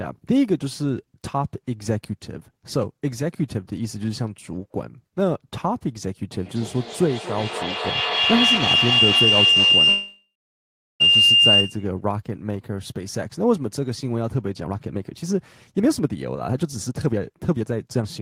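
At 6.33 s a feedback howl builds, two devices looping into each other, ringing near 3 kHz, repeating roughly every 200 ms and peaking about 6 dB above the speech until 12.0 s. Inside that, from 9.89 s to 11.02 s, the sound carries on as a fading buzz or hiss, then drops to silence for about 730 ms before resuming with nothing lost, likely a call audio freeze from late packets. Then come two jitter buffer speed-ups: from 14.64 to 15.35 s at 135% speed, trimming around 0.3 s, and from 15.78 s to the end at 130%, trimming around 0.7 s, hurried but at the same pitch.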